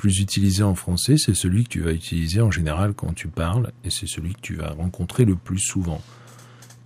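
No technical faults are audible.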